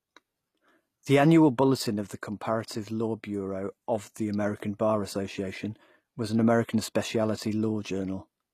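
From start to finish the speech carries HE-AAC compression, most likely: the treble sounds gritty and lispy on s sounds, consistent with around 24 kbps. A spectrogram shows a hard ceiling at 15 kHz, with upper bands looking like smeared copies of lower harmonics.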